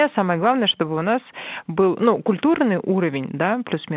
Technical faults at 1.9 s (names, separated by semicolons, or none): none